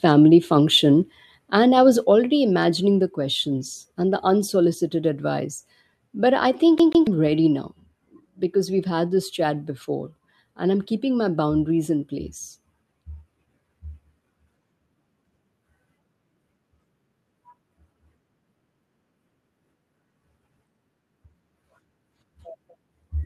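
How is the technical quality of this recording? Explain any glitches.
The recording has two kinds of glitch: three sudden drops in level early on, and a short skipping stutter just before the 7-second mark.

The first is a microphone volume stepped down. At 1.02 s the level falls by about 3 dB. At 2.04 s, between "and I was" and "imagining the questions and", it falls by about 3 dB again. At 3.06 s, after "imagining the" and before "questions and the unsolicited", it drops by about 1 dB. Voice and background sink together in one step. The likely cause is call software judging the input too hot and turning the device gain down.

The second is a CD stuck on one turn. From 6.78 s to 7.07 s, right after "I think", a 143 ms slice of audio plays twice. The mechanism is the laser jumping back to the same spot on each revolution, as if a scratch kept throwing it back. A short mute falls at each jump. 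The result is a fast, even stutter, like a skipping disc.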